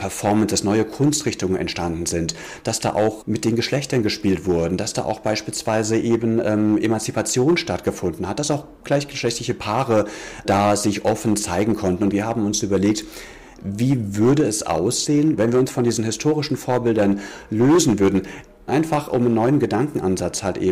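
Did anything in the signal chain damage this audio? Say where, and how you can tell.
Yes. Hard clipping runs through the whole clip: the signal was driven about 10 dB past a converter or format limit, so a few percent of samples are sliced flat. Unlike rounded analogue saturation, the flat tops give abrupt, harsh crackle on every peak.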